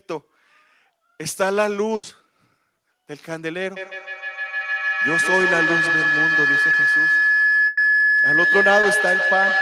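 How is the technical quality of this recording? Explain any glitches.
The recording has clear technical problems. A feedback howl takes over its second half, and packet loss breaks it up four times.

The first burst of packet loss runs from 1.95 to 2.05 s. The second runs from 7.67 to 7.79 s. The receiver lost about 80 ms, then 100 ms, of consecutive audio. It stretched the last sound across each gap and let it fade. You hear a brief held buzz or dying hiss. Then the speech jumps ahead, with that stretch gone.

The feedback howl starts at 3.76 s and lasts to the end. Two devices in one room are likely joined to the same call. Sound leaves a loudspeaker, re-enters a microphone and returns louder each trip. It narrows to a tone around 1.5 kHz. The loop delay is roughly 150 ms. At its peak it sits about 3 dB above the speech.

Short concealed packet loss occurs at 6.71 to 6.75 s and again at 8.81 to 8.85 s. 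Each time about 20 ms arrived too late to decode. The receiver filled the hole by extending the preceding sound, then blended back in. The result is a tiny smear or wobble. A short consonant there may drop out.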